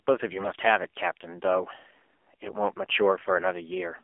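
The speech runs through the AMR narrowband mobile codec throughout, confined to 300 Hz to 3.4 kHz, buzzy and synthetic, which fits a low rate near 7.4 kbps. AMR bit errors strike at 0.32–0.49 s and 2.46–2.54 s: flipped low-priority bits misplace excitation pulses, so the voice turns hoarse, scratchy and gargly.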